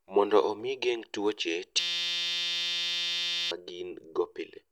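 Just after "omi igeng' tuoche", from 1.79 to 3.51 s, a system hang loop sets in: the system froze while the hardware replayed one 5.8 ms slice, fitting a 256-sample buffer, giving a steady 172 Hz buzz rather than a dropout's silence.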